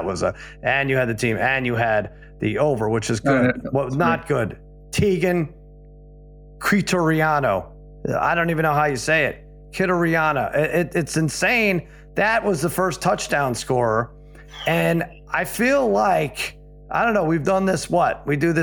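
From start to finish there's mains hum, a steady 50 Hz drone sitting roughly 25 dB under the speech, probably a ground loop or nearby transformer leaking in.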